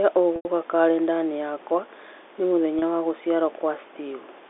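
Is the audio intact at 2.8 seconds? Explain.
No. Right after "yakwa ni", from 2.79 to 2.82 s, there is packet loss with pitch repetition: about 30 ms of audio goes missing, which fits a single lost packet. The receiver fills the gap by repeating the last pitch period it received. Because the gap is this short, the sound is a brief held, slightly buzzy tone before the signal resumes, heard within the narrow 300 Hz to 3.6 kHz band of the G.711 telephone path.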